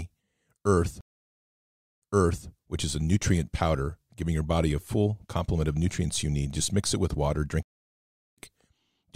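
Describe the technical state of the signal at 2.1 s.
At 2.1 s the signal sits inside a stream reconnect spanning 1.01 to 2.48 s. The connection dropped, leaving about 0.98 s of silence. A fresh decoder then resumes about 0.5 s earlier than the break, repeating material before "which is a nutrient".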